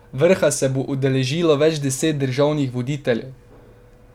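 Nothing goes wrong anywhere in this bit of speech, so there's really no fault to walk through.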